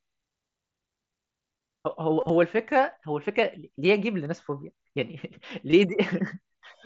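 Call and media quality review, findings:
Concealed Bluetooth headset packet loss, 2.21–2.30 s, 4.25 s, 5.70–5.73 s: brief buzzy held tone, slight warble on recovery, worst at 2.21 s; single loss at 4.25 s nearly hidden. Lost headset-to-phone packets, each gap filled by repeating a recent waveform stretch. Waveform shows copied periodic cycles; spectrogram shows frozen harmonic bands below the mSBC path's 8 kHz ceiling.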